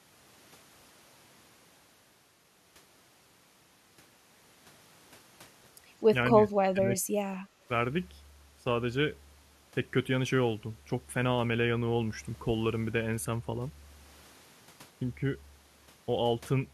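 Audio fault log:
6.32–6.36 s and 6.73–7.21 s, speech suppressed in double talk: the talker's level sags, slightly and briefly at first, then by roughly 15 dB across the longer stretch. This is likely an echo canceller mistaking overlapping far-end audio for echo and attenuating both.
7.49–7.67 s, background gated by the echo canceller: the room sound drops by about 9 dB for this short span, then returns. The canceller clamps the microphone down while the loudspeaker plays and then releases it.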